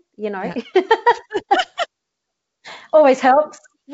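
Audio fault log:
Nothing to log here; the speech comes over as ordinary G.722 wideband telephone audio at what sounds like 64 kbit/s, with no faults to point to.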